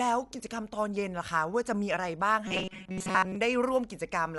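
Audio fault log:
Throughout: Dolby Digital compression. The audio is dull, with nothing above 11.5 kHz, and a rough, fluttering grain clings to the voiced parts. The band limit and the noisy fill where detail should be point to an AC-3-style encoder run at a low rate, likely around 64 kbps. At that rate many frequency lines get no real data and the decoder pads them with dither noise, which gives the plainly audible coarseness.
2.48 to 3.36 s: robotic sound from repeated short buffers. Across most of this stretch the sound turns into a rigid metallic buzz fixed at 188 Hz. It still loosely tracks the speech. A 188 Hz repeat fits a buffer of about 5.3 ms being replayed over and over while fresh audio is skipped, likely because new data reached the playback side too seldom.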